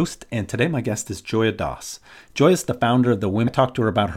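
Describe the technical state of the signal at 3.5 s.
At 3.5 s the speech jumps abruptly forward, with a small blip between 3.46 and 3.48 s. This is likely a stream segment skipped. One piece of the segmented stream failed to load, and the player went straight on to the next.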